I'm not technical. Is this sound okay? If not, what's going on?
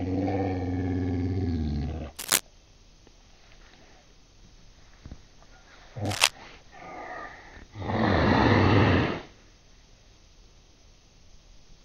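No. There are two short bursts of cable scratch noise: one from 2.16 to 2.40 s and another from 6.05 to 6.32 s. Each lasts about a quarter of a second and sounds like rough scratching or rustling laid over the audio, roughly as loud as the sound itself. The likely cause is a worn cable, plug or control being moved, so its electrical contact flickers and injects uneven noise.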